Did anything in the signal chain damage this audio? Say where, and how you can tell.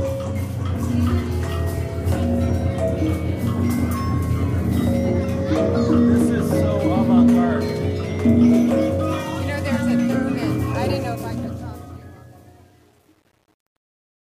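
Yes. From 10.97 s to the end, an undithered volume or sample-format stage causes truncation distortion on a fade. The fade-out is smooth in level, but its tail turns gritty, worst from 11.67 s. The waveform shows stair-steps, and the spectrogram shows scattered harmonic hash. This fits roughly 9-bit resolution.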